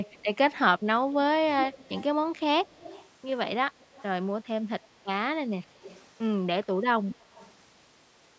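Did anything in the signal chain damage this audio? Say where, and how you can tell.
Yes. An echo leak at the call-processing stage: a delayed copy of the speech trails it by 145 ms at 0.03–0.26, 1.21–2.04, 2.26–2.4, 2.57–3.09, 3.79–4.03, 5.74–6.1 and 7.1–7.53 s. It is strongest at 1.21–2.04 s and weakest at 2.26–2.4 s, likely a loudspeaker pickup the echo canceller didn't fully remove.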